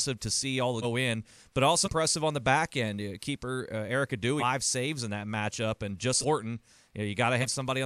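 Compressed frames skipped at 0.82, 1.84, 4.39, 6.20 and 7.41 s: the speech lurches forward by roughly half a second, a fifth, a fifth, a third and a tenth, consistent with whole 46 ms frames dropped.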